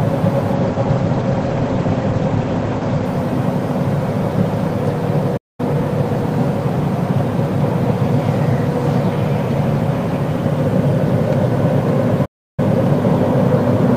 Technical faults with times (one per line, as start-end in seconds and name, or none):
0.55-3.13 call bitrate drop
5.37-5.60 playback stall
12.25-12.60 playback stall